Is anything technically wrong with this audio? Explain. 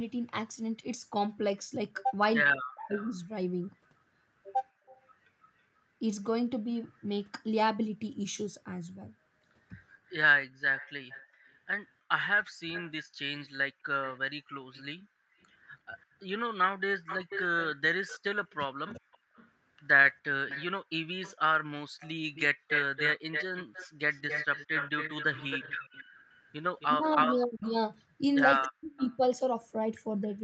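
Yes. There are three kinds of fault, all tied to echo cancellation on a speakerphone call.

Speech suppressed in double talk occurs at 2.55 to 2.9 s, briefly at 10.57 to 10.63 s, then at 16.84 to 19.02 s and 26.86 to 28.92 s. The speech dips sharply, by up to about 40 dB. The dip is shallower, around 25 dB, in the 16.84 s stretch. The likely cause is both sides talking at once. The echo canceller could not tell its own talker from the loudspeaker echo, so it turned everything down.

Echo leak runs from 2.89 to 5.06 s and again from 10.77 to 29.17 s. A delayed copy of the speech trails the original by 326 ms. It sits about 20 dB below the speech in the first stretch. In the long second stretch it is louder, only about 10 dB down. This is likely a loudspeaker on one side whose echo canceller did not fully remove what its microphone picked up, so the remainder came back.

Background gated by the echo canceller appears between 21.9 and 26.15 s. 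The room sound drops out by about 40 dB, for about half a second in total. It returns afterwards. The canceller clamped the microphone hard while the loudspeaker was playing and released it afterwards. The top end stops at 8 kHz, which matches the Opus call path.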